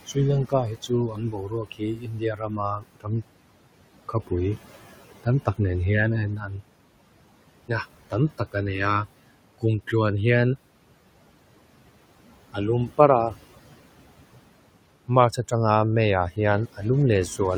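It's a speech recording, and the noise suppressor is leaving artifacts all the way through: it pulls the background down by about 18 dB, so the leftover background sinks and swells around the voice. Early on, from 0.43 to 3.23 s, there's speech cut by the noise suppressor. It mistook roughly two seconds of quieter speech for noise and dropped it by as much as about 19 dB, so those bits sound swallowed. The room noise underneath sits about 18 dB below the speech.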